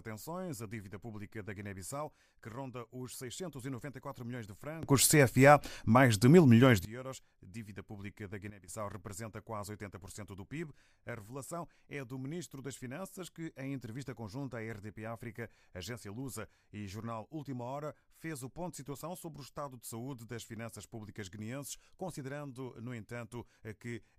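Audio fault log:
4.83–6.85 s and 8.50–8.68 s, sudden gain jump: just after "milhões de" the speech and its background noise leap up together by about 19 dB for two seconds, then after "pública da" drop by about 11 dB for a fraction of a second before "representa quase". Each edge is likely an unramped digital gain change, so the waveform envelope steps abruptly and the spectrogram shows a sharp vertical boundary across all frequencies, with the noise floor shifting too.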